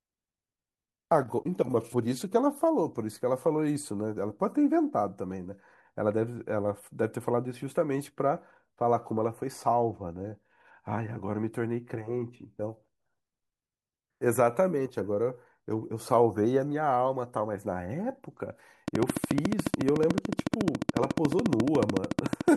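Speech, and it's fine up until the last few seconds, where a train of clicks takes over from 18.88 s to 22.49 s. They tick along at a steady 13.9 per second, roughly fifty of them, each much the same shape and standing out around 20 dB above the speech, so they're obvious even in the gaps. That regular, identical pulsing most likely comes from interference from nearby equipment or a faulty connection or power supply.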